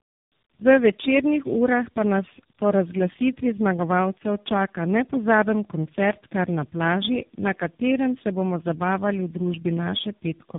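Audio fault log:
throughout, tandem speech coding: rough, muffled and warbly speech with nothing above 3.7 kHz. The call seems to have been decoded and re-encoded at each link, so three low-rate speech coders in series, ending in one like AMR-NB, each compounded the previous one's damage.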